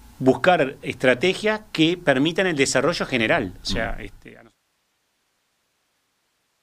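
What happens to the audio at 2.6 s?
At 2.6 s the audio is intact, with no dropout, click, distortion or other fault.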